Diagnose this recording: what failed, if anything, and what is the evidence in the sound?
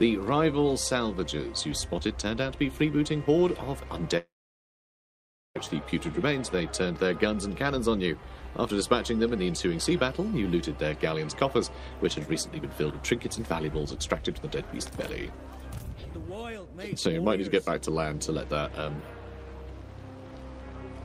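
Network: at 4.17 s the sound fades into a buzz, then silence until 5.57 s, resuming past the gap. Likely a long network dropout.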